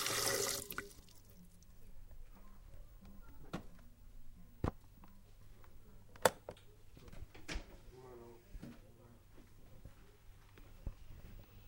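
The clip is a recording of everyday sounds with two timing faults close together. At 5.41 to 5.43 s there is a skip ahead. Roughly 0.4 s of audio is missing, and the sound on either side of the jump is butted together with no silence or concealment fill. That lack of any gap sets it apart from a dropout, which leaves a hole or a smeared patch. It points to a packet stretch being discarded, in transit or by a jitter buffer overflowing while newer audio was already queued. Right after, from 5.52 to 7.11 s, comes a jitter buffer speed-up. The buffer was still holding more than its target, so the receiver trimmed short pitch-period-length pieces again and again, about 70 ms in all. Playback runs at 104% speed while the pitch stays where it was, which distinguishes it from a resampling or clock-rate error, where pitch would rise along with tempo.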